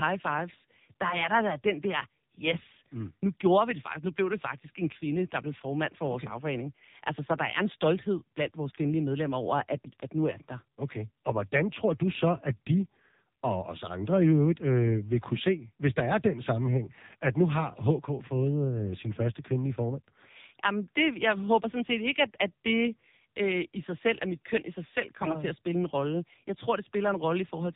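From start to finish the speech sounds buzzy, synthetic and muffled, with nothing above about 3.8 kHz. This is the AMR narrowband mobile codec under heavy strain. Its vocal-tract model gets too few bits, which fits a low rate around 6.7 kbps.

At 10.00 s a single sharp, loud pop lasting about 20 ms jumps out, roughly 15 dB above the speech, which carries on underneath. It is likely caused by a brief voltage spike from a plug, switch, static or driver glitch.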